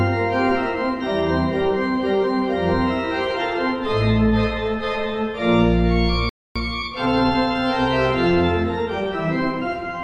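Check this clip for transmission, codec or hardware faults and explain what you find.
Two playback faults appear close together, both downstream of transmission and coding.

A playback stall runs from 6.29 to 6.56 s: the player likely ran out of buffered data or had its output thread blocked, so the audio stops mid-flow and leaves about 260 ms of silence before picking up again.

Time-compressed catch-up follows from 6.56 to 7.60 s: to clear the backlog left by the stall, the player removes small slices and cross-fades across the joins, running at 1.25 times normal speed. The sound is audibly hurried at unchanged pitch.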